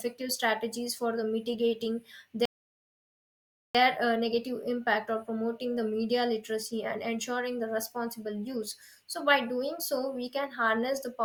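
At 2.45 s, just after "strategies for the mitigating", a rebuffering stall halts playback: the player runs dry and the speech drops to silence until 3.75 s. It then resumes on "uh negative impact or" exactly where it stopped, adding 1.29 s. Unlike a dropout, nothing is skipped.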